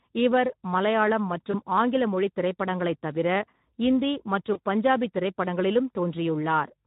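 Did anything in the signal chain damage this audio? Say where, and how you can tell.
Yes. The damage comes from the codec stage, with two network losses on top. Throughout the speech there is a hoarse, grainy roughness, as though the voice were pushed through a noisy excitation. That is the sound of the Speex codec running short of bits, and the plainly audible damage fits a low-to-middle Speex mode around 11 kbps. It differs from a transform codec such as MP3, which smears transients and swirls high frequencies. Here the damage sits in the voicing itself, because CELP rebuilds speech from a coarsely coded excitation.

At about 1.51 to 1.55 s, between "இவர் மலையாளம்" and "ஆங்கில மொழித் திரைப்படங்களைத்", and again at about 4.53 to 4.59 s, the speech briefly turns into a stretched sound that sags in level. This is VoIP packet loss concealed by the speech codec, and each event points to a single lost 20 ms frame. 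The decoder repeated its last pitch and filter and faded the gain. A plain network dropout would leave silence or a click, but these gaps are filled with a smeared continuation, and the voice takes a moment to firm up afterwards.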